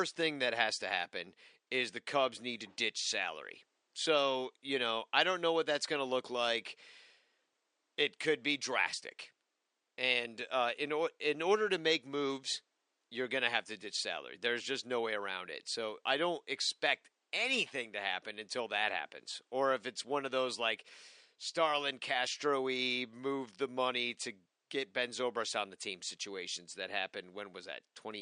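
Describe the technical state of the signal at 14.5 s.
At 14.5 s the speech signal is intact, with only the room's own background noise sitting about 50 dB below it.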